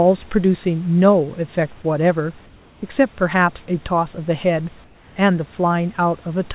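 From 2.46 to 2.82 s, and again from 4.84 to 5.16 s, the room tone in the pauses turns into a steady, featureless hiss, about 2 dB and then about 3 dB quieter than the real background around it, which sits roughly 31 dB below the loudest speech. This is comfort noise in place of the background: the sender likely stopped transmitting during the silence, and the receiver filled each gap with synthetic noise only loosely matched to the room.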